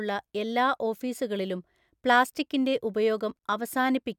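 Listening to the speech recording, nothing stood out as a technical problem at any point.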